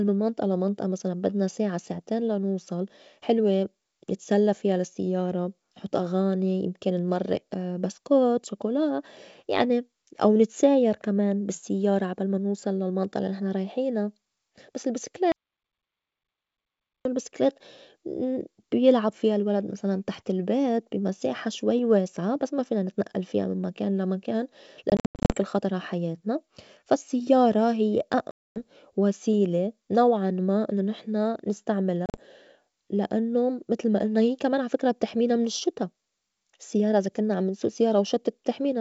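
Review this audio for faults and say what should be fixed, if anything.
Between 15.32 and 17.05 s the speech cuts to dead silence for about 1.7 s, with no room tone at all. This is an audio dropout to silence, likely from the input being lost while the recorder kept writing silence.

Packet loss on an ADPCM call leaves hard-edged holes in three places: 24.90 to 25.36 s, between "من مكان لا مكان" and "خطر عحياتنا فا السيّارة"; 28.31 to 28.61 s, between "عحياتنا فا السيّارة هيّ" and "وسيلة نوعاً ما إنّو"; and 32.06 to 32.19 s. After each hole the speech comes back slightly distorted for a moment. The first event loses 290 ms in gaps scattered over 400 ms, the longest 90 ms. The second loses 250 ms. The third loses 80 ms over 120 ms. Lost packets were replaced by silence, so the decoder's adaptive predictor and step size fell out of step with the sender's until they resynchronised.

To prevent this, secure the input connection and add packet-loss concealment with state recovery, or redundancy, on the ADPCM link.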